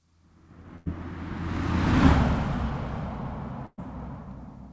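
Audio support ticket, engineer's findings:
Burst of packet loss, 0.76–0.88 s and 3.66–3.80 s: packets dropped in the call path; concealment holds and fades the last sound for about 100 and 120 ms, then audio jumps ahead.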